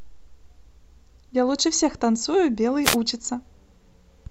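A speech recording with a wireless microphone noise hit: the radio link fades briefly, so receiver noise bursts through as a short static swish from 2.83 to 2.97 s.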